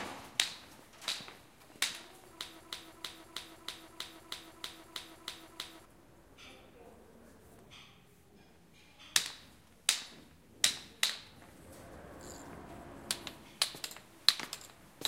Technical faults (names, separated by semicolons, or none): broken-record loop